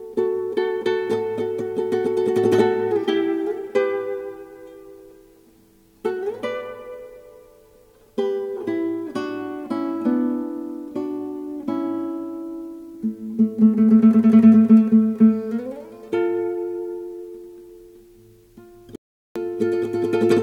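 Near the end there's an audio dropout to silence from 18.96 to 19.36 s, 0.4 s of silence with no room tone, likely from a briefly lost input.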